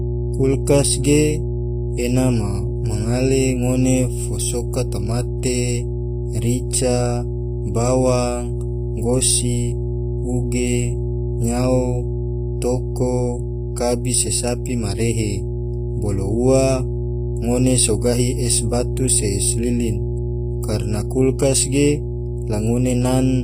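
Speech, carrying two faults from start to finish. A steady 60 Hz mains hum sits only a few decibels below the speech, which points to a ground loop or nearby transformer. The treble is plainly damaged, gritty and metallic, and stops at 15.5 kHz. This is likely HE-AAC compression, with the upper band rebuilt from copied lower bands, consistent with a low bitrate around 24 kbps.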